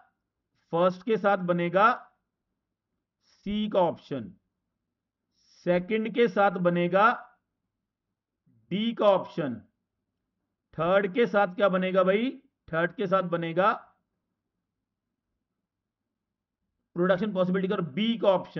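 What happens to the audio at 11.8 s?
Nothing goes wrong at 11.8 s; the audio runs through that moment intact, with no dropout, click or other fault to be heard.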